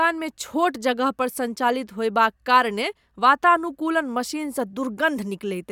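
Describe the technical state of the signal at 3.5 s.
At 3.5 s the signal is intact, with no audible fault in the speech at that moment.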